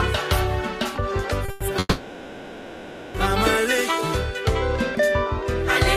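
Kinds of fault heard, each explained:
Short stall from a late packet: at 1.45 to 1.50 s a packet arrived late and the jitter buffer ran dry, so the last sound is held for about 30 ms before playback resumes from the same point. Nothing is lost, but the timing slips.
Call audio freeze: at 1.50 to 1.63 s and again at 1.79 to 3.16 s the sound stalls, filled with a held, fading continuation for 110 ms and then 1.35 s, briefly dropping to silence in the longer one. The likely cause is packets delayed in transit. Playback then resumes where it stopped, with nothing missing.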